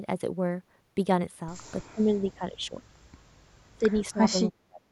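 From 1.87 to 2.82 s the speech dips by about 25 dB in pieces, roughly 0.7 s in all. This is speech suppressed in double talk, likely an echo canceller ducking both sides. At 2.27 to 2.33 s a faint echo leak appears: a copy delayed 306 ms, about 30 dB below the speech, likely uncancelled loudspeaker pickup. From 3.77 to 4.86 s the same suppression returns, with drops of about 30 dB.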